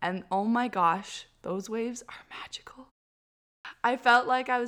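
This speech clip has a clipped start after a pause: following a half-second silence, the sound resumes abruptly at 3.33 s, with about 0.32 s missing up to 3.65 s. The output device appears to have gone to sleep during the pause and needed time to wake and lock again, swallowing the opening of the next utterance. Muted pauses would only drop the background during the gap, leaving the speech onset intact; here the speech itself begins partway through.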